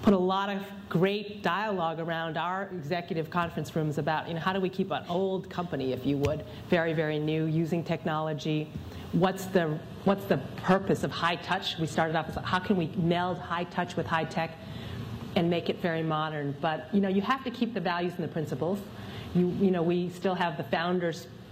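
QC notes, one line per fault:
9.76 s to end: adaptive stream at a lower bitrate. Quality drops suddenly with no gap. Codec artefacts rise and nothing sounds above 14.9 kHz, which fits a switch to a 24 kbit/s HE-AAC stream.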